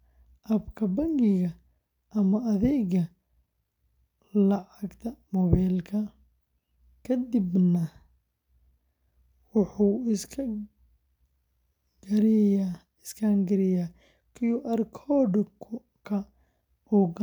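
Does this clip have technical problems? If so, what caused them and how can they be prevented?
No, the speech signal holds steady throughout, with no interruptions, level problems or added disturbances that would point to a fault in how it was captured or transmitted.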